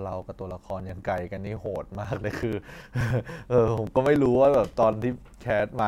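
From 0.13 to 5.79 s there are periodic USB or driver dropouts: every 96 ms a few milliseconds of speech are skipped, giving steady ticks under the voice.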